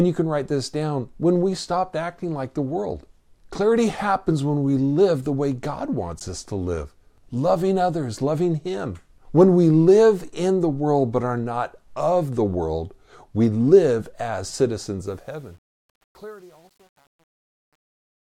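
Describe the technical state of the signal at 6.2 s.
Right at 6.19 s there's a block of digital silence, about 14 ms long, just before "us to live loving". A short run of samples has been swapped for silence, so the speech drops straight to nothing and snaps back with no fade on either side. At this length the whole thing comes across as a quick tick or tiny pop rather than an audible gap.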